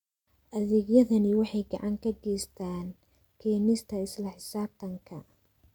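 Listening to this short speech recording, nothing technically wrong stood out at any point.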